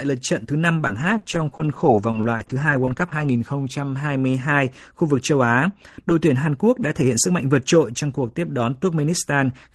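Speech, with a stretch of repeated packet loss (robotic sound) from about 0.77 to 3.25 s. Over those two and a half seconds there are a dozen or so short holes, the longest around 40 ms. Each one gets papered over by stretching the last bit of sound, adding up to roughly 280 ms of patched audio, about 11% of the span, which is why it comes out choppy. The audio tops out around 12 kHz, which fits a call codec like Opus.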